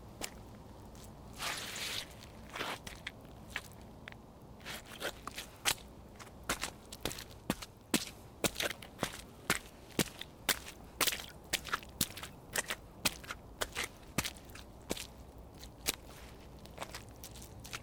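No technical faults are audible.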